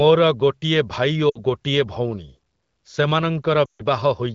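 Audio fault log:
1.29 to 1.38 s, lost AMR speech frames: a 60 ms stretch, about three 20 ms frames, goes missing just before "ଗୋଟିଏ ଭଉଣୀ". The decoder fills in by repeating its last good settings at falling gain, so you hear a short smeared dip before speech picks back up, a bit weak for a moment.
3.65 to 3.82 s, lost AMR speech frames: a longer 140 ms gap. The concealed sound drops to near silence within two frames, as the wideband decoder does at 12.65 kbit/s, and it comes back rough.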